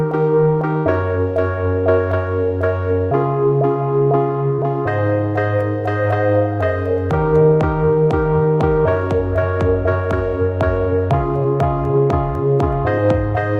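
At 0.77 s comes a burst of packet loss: about 80 ms of audio never arrived, so the receiver stretched the last sound into a fading tail before jumping ahead. Short concealed packet loss at 4.55 s and 11.43 s fills far smaller holes, about 29 ms and 15 ms, heard as a brief smear rather than a fade.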